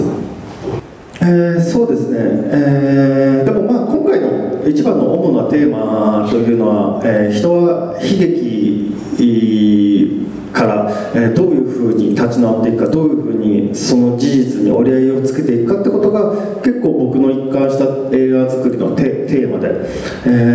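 Gain pumping runs through the whole clip: the gain ducks by around 20 dB under each loud sound, squashing loud and soft together. Likely cause: input gain set far too high, with a fast limiter clamping it. Unlike a noise gate, the level swings rather than cutting out, heard within the call-limited band that stops at 8 kHz.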